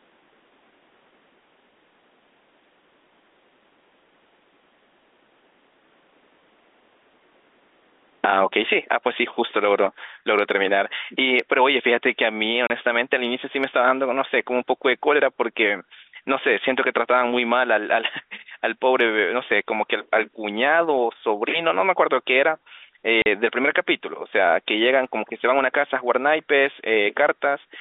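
Gain pumping runs through the whole speech clip. Loud and soft parts sit closer in level and the sound is squashed, with a gain swing of around 30 dB, likely from excessive gain driving a fast limiter. Packet loss filled with silence cuts 12.67 to 12.70 s and 23.22 to 23.26 s. These are hard-edged gaps of 30 and 40 ms, which fits dropped 10 ms packets, heard through the narrow telephone band.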